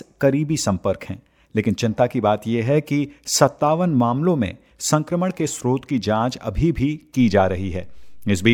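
At 7.20 s a DC step appears. The waveform's zero line jumps by about -33 dBFS and holds to the end. It sounds as a low thump.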